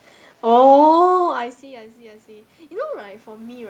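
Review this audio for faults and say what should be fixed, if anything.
Automatic gain rising starts at 1.05 s and continues to the end of the clip, at 3.7 s. Around 1 s the talker moves away from the microphone, and the input level drops by about 24 dB. The gain control reads this as too quiet a signal. It slowly pushes its gain up to compensate. The voice climbs back, but the room noise swells along with it. To prevent this, slow the gain control's rise or cap its maximum boost.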